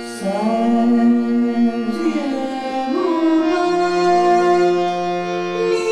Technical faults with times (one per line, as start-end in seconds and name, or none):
0.00-5.92 DECT cordless phone buzz